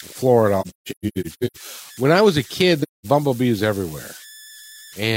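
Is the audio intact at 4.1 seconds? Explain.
No, converter idle tones are present at 4.1 s, as they are across the whole clip. An undithered delta-sigma converter settles into repeating bit patterns on low-level input, producing a tone around 2 kHz, about 22 dB below the speech, with grainy noise under quiet passages.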